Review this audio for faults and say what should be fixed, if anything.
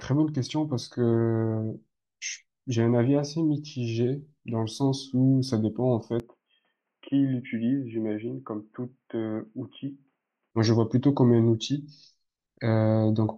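From 6.20 to 10.51 s the speech turns dull, boxy and slightly quieter, with nothing above 3.2 kHz: likely an input switched to a poorer device. Lock the recording to one microphone so the system cannot change inputs mid-take.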